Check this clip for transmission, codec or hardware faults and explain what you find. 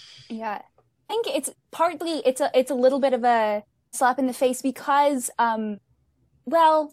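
The speech has one kind of fault, occurring three times. Compressed frames skipped at 1.09–1.12 s (before "it's partly it's a"), 3.93–3.96 s (between "little bit of a" and "slap in the face") and 5.74–5.78 s: runs of missing or rejected frames, roughly 300, 400 and 200 ms, consistent with frames of about 46 ms. Each is a jump forward in the speech.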